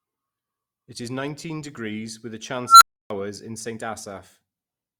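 Speech, where an unstable filter takes over at 2.66 s, just after "nineteen degrees with a". A squeal around 1.5 kHz swells to clipping within 0.15 s, then the overflow cuts to about 0.29 s of silence before the filter resets. The abrupt dropout is what sets it apart from acoustic feedback howl.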